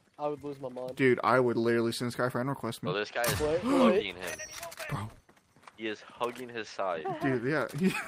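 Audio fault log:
No faults heard anywhere in the audio.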